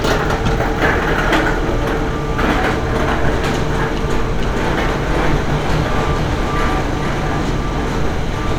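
From 4.40 s to the end, a doubled audio track appears: an abrupt, uncoloured copy about half a second behind, a few dB quieter, likely from a second capture path, unlike a decaying echo.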